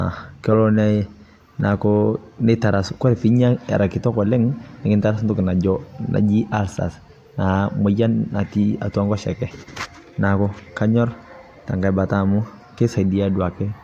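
No faults can be heard anywhere in this speech recording.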